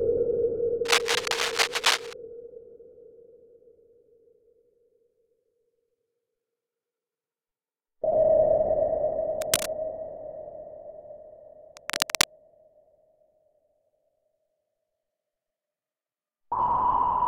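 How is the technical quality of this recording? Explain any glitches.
The recording is marred by three bursts of cable scratch noise, at 0.85 to 2.13 s, 9.41 to 9.66 s and 11.77 to 12.24 s. Each is a rough, uneven scratching roughly as loud as the sound itself, likely from a worn cable or connector being moved so its contact resistance jumps about. A spectrogram would show dense, broadband, irregular speckling; the waveform shows ragged spiky bursts.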